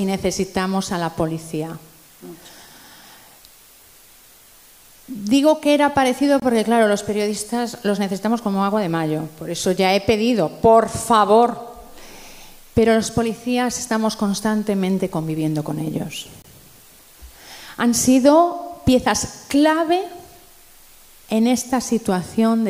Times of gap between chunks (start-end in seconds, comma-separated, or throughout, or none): 6.40-6.42, 16.42-16.44